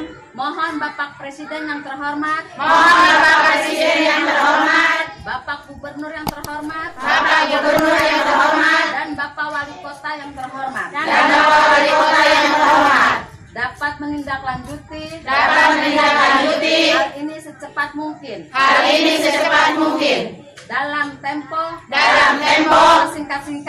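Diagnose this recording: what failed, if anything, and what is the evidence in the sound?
Hard clipping runs through the whole recording. The level was driven about 6 dB beyond what the converter or sample format could pass, so the highest peaks are sliced flat. Only a small fraction of samples, around one or two percent, hit the ceiling. On a waveform the peaks show squared-off plateaus. A spectrogram shows brief vertical smears of harmonics reaching far up the spectrum at each peak.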